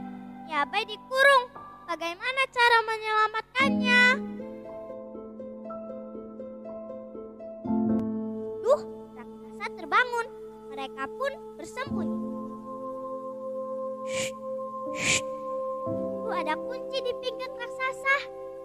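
The audio has one fault, a drift correction step from 2.27 to 4.41 s. Playback slows by 5.77% and pitch drops 103 cents, about a semitone, before returning. On a spectrogram, harmonic lines step down then back up; the waveform looks stretched. It was likely a clock-matching buffer adjustment.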